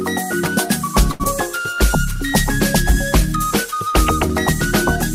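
At 1.11 to 1.22 s there is a short stall from a late packet: the jitter buffer ran dry, and the last sound was stretched for 84 ms before resuming, with nothing lost. At 1.24 to 1.27 s a skip ahead follows, dropping around 70 ms of queued audio to recover the delay, so playback jumps forward with an abrupt join.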